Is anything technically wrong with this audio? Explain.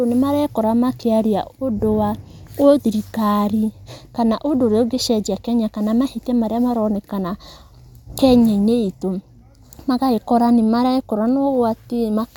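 No, nothing technically wrong can be heard in this speech recording. There is no fault to point to at any moment in the clip.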